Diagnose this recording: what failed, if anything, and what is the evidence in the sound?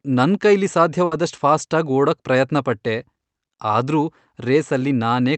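A burst of packet loss in the network stage interrupts the speech from 1.05 to 1.13 s. For about 60 ms the receiver extends the last received sound and fades it out, producing a held, decaying tail rather than silence. When audio resumes, roughly 60 ms of speech is gone, so the speech jumps forward. The concealment is heard through the call path's Opus coding, whose audio extends up to about 8 kHz, consistent with a 32 kbps call setting.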